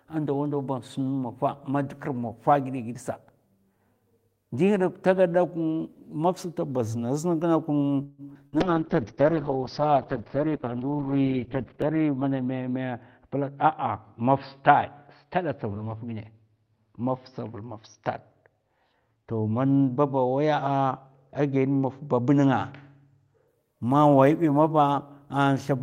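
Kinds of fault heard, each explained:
Call audio freeze: From 8.03 to 8.21 s the sound stalls and the last instant is stretched into a fading buzz or hiss for about 149 ms, then resumes exactly where it stopped. That points to a likely packet hold-up that emptied the jitter buffer. Unlike packet loss, nothing is missing.
Skip ahead: At 8.34 s playback jumps forward with only a few milliseconds of fill, dropping roughly 70 ms of audio and joining the two sides almost directly. The buffer likely discarded material that was already queued, so unlike a freeze there is no held sound, just an abrupt cut.
Burst of packet loss: At 8.47 to 8.56 s about 56 ms of concealment, a held and fading continuation of the last sound, replaces 80 ms of real audio. The audio then picks up further along. Unlike a freeze, the stretch underneath is lost rather than delayed.
Call bitrate drop: From 8.61 to 23.54 s the encoder falls from 32 to 7 kbps, staying at the lowest rate for about 3.3 s, and bandwidth narrows from 20 kHz to 4 kHz. 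The sound turns muffled and coarse. Timing and pitch stay intact, which sets it apart from buffer adjustments.
Jitter buffer slow-down: From 8.74 to 9.92 s the receiver repeats single pitch periods to rebuild its reserve, adding 94 ms. Playback runs at 93% speed with pitch unchanged, so sounds are drawn out. The timing shift rules out a codec fault.
Jitter buffer speed-up: At 12.34 to 12.89 s (113% speed) and 13.28 to 14.22 s (106%) the receiver trims short pitch-period pieces, removing roughly 70 ms each time to cut excess delay. The audio sounds hurried at the same pitch, the mirror image of the slow-down.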